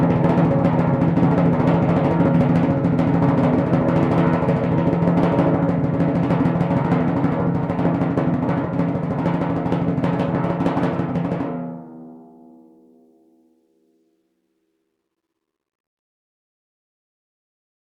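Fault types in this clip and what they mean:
Hard clipping: The music is driven about 5 dB past what a stage in the chain can pass, so every peak from 0.03 s to 5.69 s is sliced off flat. On the waveform, the tops and bottoms in that stretch sit pressed against a fixed ceiling. On the spectrogram, the squared-off peaks spray added harmonics up into the high kHz range.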